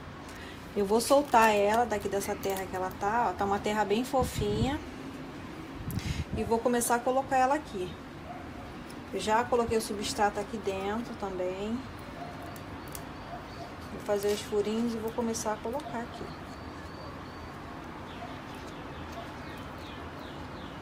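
No technical faults can be heard anywhere in this audio.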